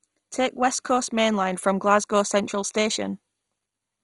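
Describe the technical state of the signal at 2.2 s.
At 2.2 s the speech carries the same damage that runs through the whole clip, most likely from heavy MP2 compression at a bitrate low enough to suggest something around 56 kbps. Starved of bits, the encoder has switched off its upper sub-bands, so nothing sounds above about 11.2 kHz, and the bands it keeps are coarsely quantised and flicker on and off. The result is a dull, muffled tone with a gurgling, granular roughness.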